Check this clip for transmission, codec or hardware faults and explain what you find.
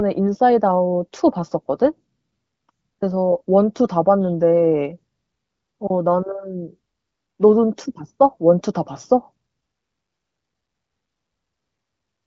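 No faults turn up: the speech carries the band-limited character of AMR wideband (HD Voice) coding, with nothing above about 7.7 kHz and the codec working at a rate high enough, which fits roughly 18 kbit/s, to leave at most faint traces of its processing.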